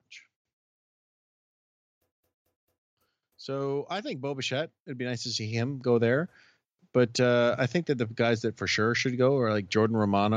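At 2.18 s the speech catches like a CD stuck on one turn: the same 0.22 s slice plays three times through 2.85 s, each with a tiny mute at the jump, as though the laser keeps getting thrown back one track by a scratch. It gives that quick, even stutter.

Then from 3.44 to 5.96 s there's automatic gain rising. The gain control decided the input was too quiet and pushed the level up gradually, about 11 dB in total, so the voice and the background swell together over those two and a half seconds.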